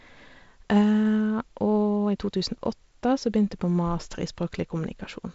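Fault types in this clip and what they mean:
Nothing stood out on listening to this speech recording; it carries the band limit of wideband telephone coding, with nothing heard above about 7.7 kHz.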